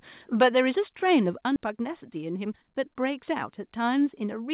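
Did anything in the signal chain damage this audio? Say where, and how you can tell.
Yes. Four kinds of damage show up, spread across the converter, call processing and jitter-buffer stages, all heard through a narrowband G.711 path with nothing above 4 kHz.

Microphone overload, at the converter, from 0.41 to 0.48 s: the loudest syllables there take on a harsh, crackling edge, and the waveform tops are flattened. The sound was driven about 6 dB past full scale, and a noticeable share of samples is pinned at the limit. The cause is likely an input gain set too high ahead of the analogue-to-digital converter. Unlike codec distortion, the rasp follows the peaks and disappears on quieter passages.

Microphone volume stepped down, in call processing, at 0.43 s by about 2 dB and at 1.44 s by about 4 dB: voice and background drop together, instantly, with no ramp. The first step lands inside the clipped burst, which points to automatic gain control reacting to the overload. 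A fade or a compressor would shift the level gradually and track the signal, rather than resetting the input volume in discrete steps.

Skip ahead, in the network or jitter buffer, from 1.56 to 1.58 s: playback jumps forward, with roughly 0.7 s of audio gone and the two sides of the cut joined almost directly. Nothing fills the hole. The audio was dropped on the way or by the jitter buffer while later audio was already waiting. This is different from a packet-loss dropout, which leaves silence or a concealment smear rather than a seamless splice.

Jitter buffer speed-up, from 1.66 to 3.61 s: the sound runs about 7% fast while the pitch stays unchanged, and it sounds hurried. Short pitch-period pieces were cut repeatedly, totalling around 150 ms, to drain the excess buffer. A resampling or clock-rate error would raise the pitch along with the tempo, but here only the timing changes.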